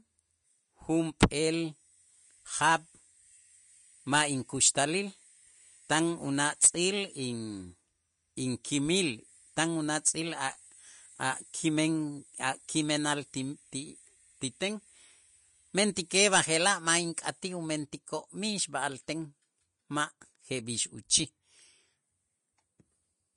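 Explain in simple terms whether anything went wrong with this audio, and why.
Vorbis compression, throughout the speech: nothing above 10.5 kHz survives, and the treble sounds hissy and grainy, likely from squeezing the file too small.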